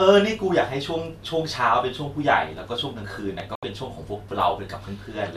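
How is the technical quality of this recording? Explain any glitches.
Two short glitches land close together in the second half of this speech recording.

At 3.40 s there is a single sharp loud pop, peaking a few dB above the speech, most likely from a voltage spike such as a switch or static discharge entering the signal path.

From 3.55 to 3.63 s the speech cuts out for about 72 ms: a digital broadcast dropout, where the receiver muted after losing corrupted frames, which fits roughly three frames going missing.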